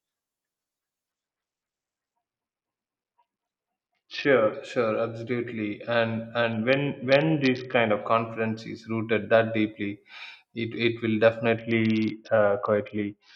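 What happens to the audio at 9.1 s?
Nothing goes wrong at 9.1 s; the speech carries on intact through that moment, with no dropout, click or distortion to be heard.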